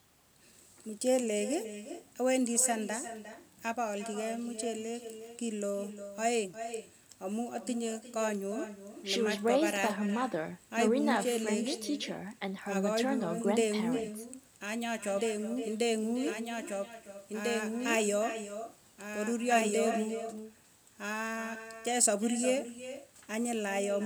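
From start to finish the speech is trailed by an echo with no canceller. The far end's loudspeaker leaks into its microphone and nothing removes it, so each phrase returns roughly 0.4 s later, about 11 dB quieter and thinner, showing as faint repeats behind every burst on the waveform.

From 15.17 s to 19.97 s a doubled audio track appears: a full-band copy of the speech, only around 5 dB down, following about one and a half seconds behind. On a spectrogram it shows as a clean shifted duplicate with no reverberant tail, switching on and off abruptly, likely from a second, slower capture path.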